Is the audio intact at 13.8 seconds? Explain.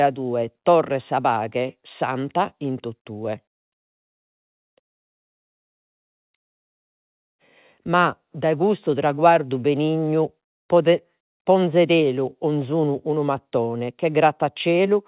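Yes, the speech at 13.8 s comes through intact, with no dropout, glitch or distortion at that moment.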